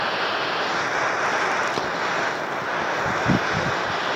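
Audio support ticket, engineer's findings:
Lost LE Audio frames at about 0.97 s and 3.05 s. Brief noisy smear, roughly 10 ms each, fitting a single dropped frame. LC3 decoder concealment is filling the gaps with the previous spectrum and randomised signs. Check the Bluetooth LE Audio link.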